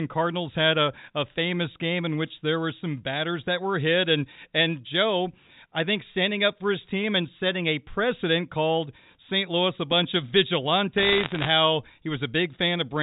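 A speech recording on a G.711 A-law telephone path, band-limited below 4 kHz, takes bit errors on the digital phone line from 10.98 to 11.50 s, at around one percent of bits. Each flipped bit corrupts a single sample, and hits on sign or high-order bits become sharp ticks, heard as a brief crackle over the speech.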